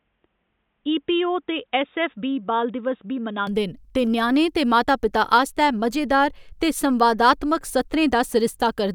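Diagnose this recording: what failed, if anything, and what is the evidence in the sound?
From the start to 3.47 s the speech is dull and boxy, with nothing above 3.8 kHz and a level about 5 dB lower, then it opens up cleanly with no gap. That's likely the input switched to a poorer device at the capture end, its narrower band and own faint noise floor, roughly 50 dB down, giving way to the proper microphone.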